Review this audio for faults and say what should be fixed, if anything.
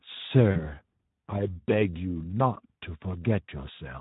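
The speech runs through the Speex codec for the whole clip at a low setting, consistent with a bitrate of about 11 kbps. With so few bits for the excitation, the voice is plainly hoarse and noisy throughout. A higher Speex quality setting or a more modern codec would prevent this.

VoIP packet loss concealed by the speech codec occurs twice. From 0.51 to 0.72 s, the gap matches about 40 ms of lost audio, likely two 20 ms frames. At 2.53 to 2.58 s, about 20 ms is lost. Each time, the decoder stretches its last pitch and filter into a buzzy tone or coloured noise that fades, and the voice stays weak briefly after the packets return. A jitter buffer with forward error correction or redundancy would prevent these gaps.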